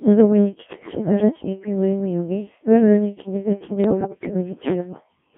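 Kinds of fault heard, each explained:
Codec 2 vocoder: Runs the whole way through, with heavy damage. Only pitch, voicing, energy and a spectral envelope survive, which fits a rate around 1.3 kbit/s, and everything's rebuilt from sine waves inside a 150 Hz to 3.4 kHz band. So the speech comes out robotic and buzzy.
Bit errors on digital voice radio: Two bursts, 0.73 to 1.12 s and 3.84 to 4.34 s, the second rougher, with roughly one bit in ten flipped against about one in fourteen earlier. Each bad frame jumps in pitch, level and timbre, breaking into bleeps and warbling gibberish.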